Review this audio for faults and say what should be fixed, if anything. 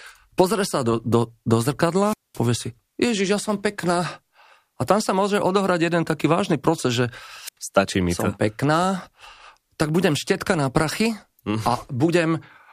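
Twice the speech is interrupted by a short burst of hiss that collapses into near silence before the talker returns: from 1.99 to 2.42 s, with a hole of about 214 ms, and from 7.46 to 7.57 s, with a gap of about 86 ms. This is a wireless microphone squelch dropout. The radio link from the transmitter weakened until the receiver's squelch gate shut off its output rather than pass static, then reopened once the signal recovered. To prevent it, improve the RF path with line-of-sight antenna placement, fresh transmitter batteries, a clear frequency and, where possible, a diversity receiver.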